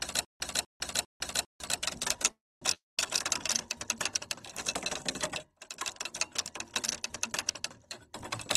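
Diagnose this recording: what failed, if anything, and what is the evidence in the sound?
Stutter with silent gaps, 0 to 1.6 s, already under way at the start: a 248 ms burst repeats every 400 ms with 152 ms of flat digital silence between, so the waveform shows identical blocks. The likely cause is a playback stall.

Call audio freeze, 2.31 to 2.64 s: the last sound is stretched into a fading buzz for about 300 ms, mostly silent on the waveform, then resumes with nothing lost. The likely cause is an emptied network jitter buffer.

Long network dropout, 2.74 to 3.07 s: a fading smear, then about 180 ms of near-blank spectrogram. About 240 ms of audio is gone when the sound returns, likely from packets lost on the network.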